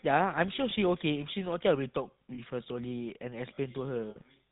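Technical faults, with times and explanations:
Throughout: GSM full-rate codec. The voice is plainly buzzy and gravelly, with nothing above 4 kHz, consistent with 13 kbps vocal-tract modelling driven by sparse pulse excitation.
0.70–0.74 s, 2.34–2.40 s and 4.10–4.18 s: lost GSM frames, lasting 20, 40 and 60 ms. Each gap is filled by repeating the last good frame, heard as a brief rough, metallic ring.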